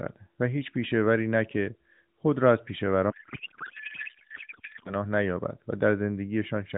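From 3.10 to 4.94 s the narrowband AMR speech gives way to garbled, warbling noise that barely follows it: a codec payload misread, probably octet-aligned frames being unpacked as bandwidth-efficient. Unlike packet loss, there are no gaps or concealment fades, only continuous nonsense until the clip recovers.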